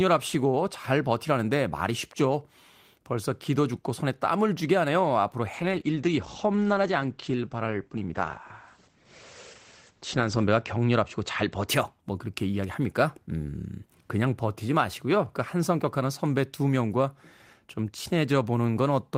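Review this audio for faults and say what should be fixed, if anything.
From 5.54 s to 11.73 s the speech goes rough and muffled, a call bitrate drop. The falling bandwidth estimate made the encoder spend far fewer bits, which points to a fall from about 32 kbps to about 12 kbps. The top end narrows from 20 kHz to 8 kHz, and the worst stretch lasts about 4.9 s. Unlike packet loss, nothing drops out; the sound is just coarser until it recovers. Allowing a higher minimum bitrate during congestion would prevent it.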